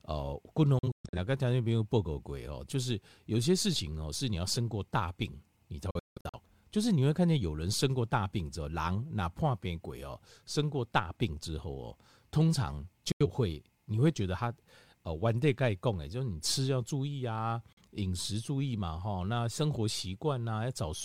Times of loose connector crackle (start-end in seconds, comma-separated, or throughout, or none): none